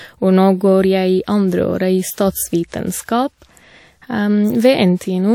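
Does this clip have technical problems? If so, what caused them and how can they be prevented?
Yes. Pre-echo occurs at 2.14–2.18 s (37 ms) and 2.67–2.72 s (46 ms): coding noise meant for a sharp attack leaks into the quiet just before it as brief hiss, visible as a broadband smear ahead of each onset. Shorter transform blocks around transients, or a higher bitrate, prevent it.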